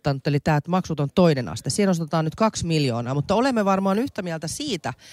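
No technical faults heard.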